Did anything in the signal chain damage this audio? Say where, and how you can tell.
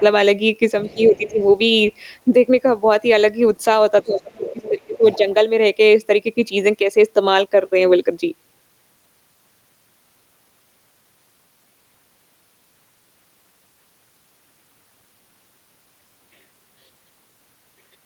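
Yes. A faint second voice sits underneath the speech at 0.84 to 0.97 s, 1.15 to 1.44 s and 4.17 to 5.34 s. It starts about 30 dB below the main talker, rises to about 25 dB below, and in the longest stretch is only about 20 dB down. This is the other side's voice leaking through. The stage is call processing: the talker's loudspeaker playback was likely reaching the microphone, and the echo canceller left part of it in the signal.

The main speech also sinks while that leaked voice is present. Between 0.94 and 1.41 s it dips by about 10 dB over roughly 300 ms. From 4.04 to 5.2 s it drops by about 20 dB for around a second. The dips line up with the echo bursts, which points to speech suppressed in double talk. The echo canceller likely could not tell the talker from the loudspeaker echo while both were active, so it turned both down.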